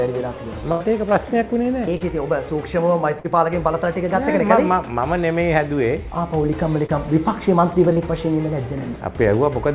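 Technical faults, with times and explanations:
0.72 to 0.82 s, burst of packet loss: a run of consecutive packets never arrived in time, leaving a hole of about 80 ms. The receiver bridged it by extending the last sound and lowering its level as the gap went on, so the audio becomes a held, fading tone or hiss instead of dropping to silence. Playback then picks up about 80 ms further on, and the material in between is lost. The sound here is limited to nothing above 4 kHz, which fits narrowband G.711 call coding.
1.98 to 2.02 s, 3.20 to 3.26 s, 6.86 to 6.91 s and 7.93 to 7.98 s, short concealed packet loss: in each spot, a missing stretch of about 20 to 40 ms was patched with synthesized continuation of the preceding sound, roughly 20 to 45 ms long, which then cross-fades back into the real signal. Each one is heard as a brief smear or wobble, and a very short sound falling inside one of these gaps can disappear.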